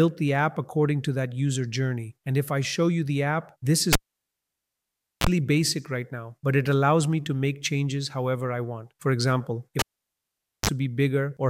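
Cable pulled and plugged in, at 3.93 s and again at 9.79 s. Each time a live lead is yanked, giving a pop and then near silence: 1.29 s the first time, 0.85 s the second. As the plug goes back in, the tip touches first and picks up a short mains buzz, 30 ms at 60 Hz in the first event and 37 ms at 50 Hz in the second. A second pop follows as the sound returns, at 5.27 s and 10.70 s.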